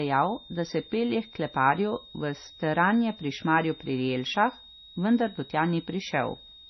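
It's a speech clip, and a switching supply whistle sits under it from start to finish: a thin, high tone that wanders between about 3.67 and 3.78 kHz, well below the speech level. That's the sound of a switching power supply slipping into an audible burst mode, or two supplies beating against each other. On top of that, the whole thing has a hard ceiling at 6 kHz, with nothing above it, plus a watery, swirly texture, chirpy sibilants and smeared consonant attacks. The damage is heavy and points to MP3 compression at a low bitrate, likely somewhere around 24 kbps, where the encoder chops the top end and keeps dropping quiet frequency lines in and out from frame to frame.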